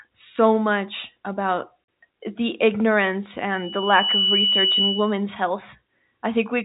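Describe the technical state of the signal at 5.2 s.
At 5.2 s a piercing 3 kHz tone is still ringing over the speech, a few decibels louder than the voice, in the final moments of a loudspeaker feedback squeal that runs from 3.53 to 5.24 s after swelling up over roughly the first 0.7 s. The microphone is picking up the loudspeaker it drives, and at 3 kHz the loop gain exceeds one, so that frequency keeps reinforcing itself until the loop is broken. It sits inside the telephone band, so the G.711 coding carries it intact.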